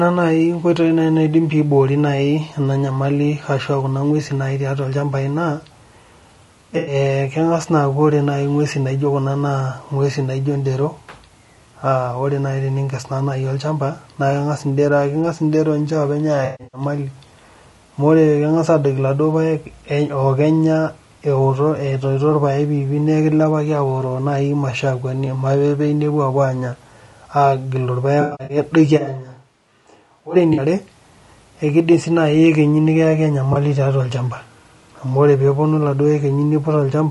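The whole clip has that rough, grainy edge you get from low-delay AAC compression, most likely AAC-ELD at around 32 kbps. At this low bitrate the codec can't code the voice's harmonics cleanly, so noise fills the gaps between them and the top end sounds thin and synthetic.

There are several patches of AAC frame loss with concealment, where the decoder patches over missing data using the last good spectrum. The first, at 6.77 to 6.95 s, is a smeared, phasey stretch covering about 100 ms of lost audio. At 16.45 to 16.81 s, around 240 ms goes missing, scattered over 280 ms, with the longest gap about 150 ms. That one sounds noisy and washed out. At 28.21 to 28.57 s there's a similar 220 ms scattered loss with runs of about 100 ms.

Right after that, from 28.99 to 30.34 s, the sound suddenly goes roomy and hollow. It drops about 10 dB, loses bass and has room noise well up behind it, roughly 35 dB under the speech. 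That's a switch to a distant microphone, likely because the close mic dropped out. It snaps back just as abruptly.

Two short concealment blips follow: a 40 ms smear at 30.53 s, and a 20 ms one at 33.53 s, just before "tiatua olchampa".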